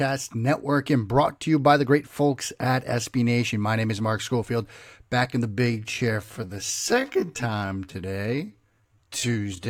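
From 5.5 s to the end, the speech becomes a time-stretched section, slowed to about 0.58 times its pace with pitch unchanged. The delivery drags abruptly, likely from software repeating short segments to lengthen the audio.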